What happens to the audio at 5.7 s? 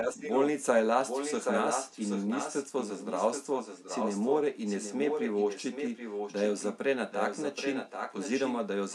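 An echo leak runs from 4.66 to 6.44 s, so at 5.7 s a delayed copy of the speech sits behind the direct voice, trailing it by 777 ms and only a few decibels quieter. The likely cause is a far end listening on a loudspeaker whose echo canceller failed to suppress what its microphone picked up, so that sound was sent back down the line as this second, late voice.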